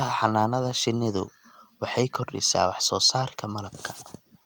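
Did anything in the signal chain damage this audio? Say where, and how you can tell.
No, no stage in the signal chain has damaged this speech recording. No part of the audio carries an audible trace of a problem introduced along the way.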